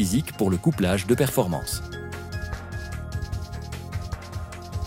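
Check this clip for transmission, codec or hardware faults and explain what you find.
One hardware-type fault stands out. A single loud pop at 1.29 to 1.31 s, well above the surrounding level, likely a voltage pulse from a plug, switch or static. Unlike a dropout, the sound carries on underneath it.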